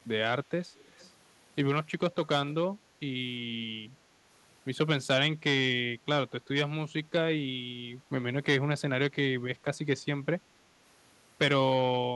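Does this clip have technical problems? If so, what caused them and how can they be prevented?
Yes. An echo leak: a loudspeaker at the other end was likely feeding its microphone, and that side's echo canceller didn't fully remove the pickup, so part of it came back. You hear this as a faint delayed copy of the speech, trailing the original by 349 ms. It runs from 0.79 to 1.11 s at roughly 30 dB below the speech, then briefly from 2.49 to 2.54 s at roughly 25 dB below. A headset, or better-tuned echo cancellation with lower speaker volume, would prevent it.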